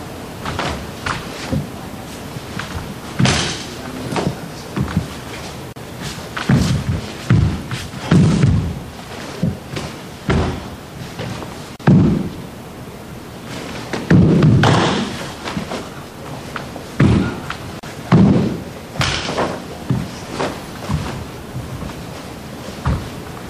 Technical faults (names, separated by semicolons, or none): gap at a join of encoded pieces